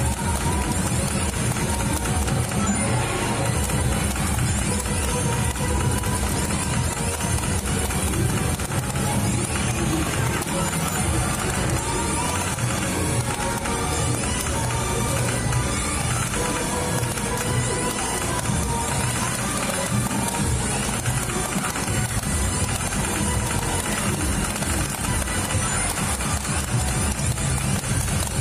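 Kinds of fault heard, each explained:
Repeated buffer: at 19.76 to 19.78 s, fresh audio failed to arrive in time, so the same 10.7 ms slice, which fits a 512-sample buffer, plays three times with hard joins. At this small size it comes across as a brief buzzy click, and essentially no audio is lost.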